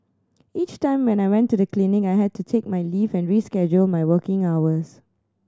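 No technical faults occur at any point, so there is nothing to place in time order.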